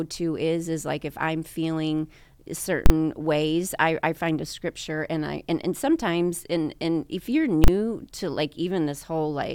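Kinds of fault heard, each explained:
Invalid numbers at full scale: A calculation in the processing went wrong and produced infinite or invalid values. Those values were forced to the largest possible sample value, so the output sticks flat at one extreme value, far beyond the speech peaks. Each stuck block lasts 40 ms. That is too brief for the jumps in and out to be heard apart, so each one lands as a single loud bang. The first hits at 2.86 s, just before "ways I I find". The second comes at 7.64 s, right after "and and if you're".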